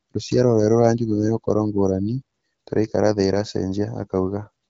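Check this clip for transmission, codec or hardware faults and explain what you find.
Nothing stood out on listening to this speech, which comes through the AMR wideband (HD Voice) codec at 12.65 kbit/s.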